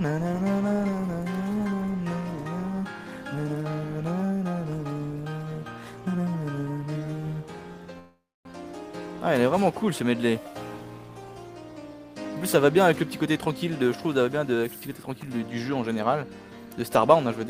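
At 7.99 s the sound stalls: the last moment carries on as a fading buzz that drops to silence for roughly 0.28 s before resuming at 8.48 s, exactly where it left off. This call audio freeze was likely caused by delayed packets emptying the jitter buffer, so about 0.46 s of filler was inserted and nothing was lost.

From 12.98 s to 13.47 s the audio briefly hurries, running at about 108% speed with its pitch unchanged. This jitter buffer speed-up came from the receiver trimming a run of short pitch-period slices, around 50 ms in total, to bring an overfull buffer back to its target delay.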